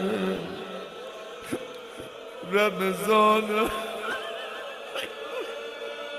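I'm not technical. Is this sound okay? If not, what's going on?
No, not quite. There are two quick chirpy blips, at 0.36 s and 4.11 s, the second a bit louder. Each is a corrupt frame decoded: a single tiny chunk of the compressed audio got scrambled, and the player played it anyway.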